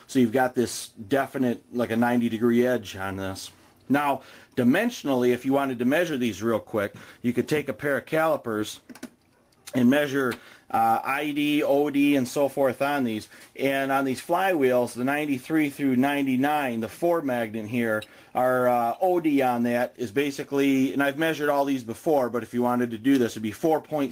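No technical faults can be heard anywhere in this audio.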